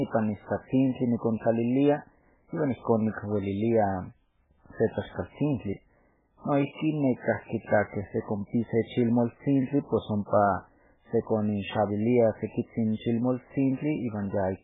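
From start to finish, the speech has lost all its treble. Nothing survives above about 3.8 kHz, so the sound is dull and boxed in. S sounds turn into metallic chirps. Quiet detail swirls and bubbles as it cuts in and out. Consonant onsets smear rather than snap. The damage is heavy. The likely cause is MP3 compression at a very low bitrate. The encoder ran short of bits, cut the top band off at a fixed point, and dropped weak frequency lines frame by frame.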